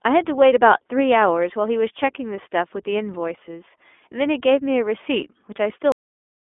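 From the start the speech has the narrow, slightly rough and synthetic quality of the iLBC codec. Nothing reaches above 3.8 kHz, and the grainy texture fits its 15.2 kbps mode, where each 20 ms frame is coded on its own, so the damage is plainly audible throughout.

Then at 5.92 s there's a cut-off end. The audio stops mid-sound and drops straight to digital silence with no decay, because the final stretch of buffers never got written or played out, leaving the last 0.66 s or so empty.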